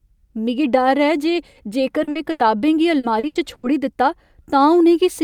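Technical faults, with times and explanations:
2.03–2.10 s and 2.11–2.18 s, short concealed packet loss: two 40 ms holes back to back, each patched by stretching the last sound, so you get a quick smeary wobble.
2.31–2.42 s, burst of packet loss: about 80 ms went missing in one go, so the concealment holds and fades the last sound before the audio picks up further along.
2.99–3.66 s, repeated packet loss (robotic sound): four gaps, the longest 80 ms, covering about a third of the stretch, so the patching keeps kicking in and it turns choppy and robotic.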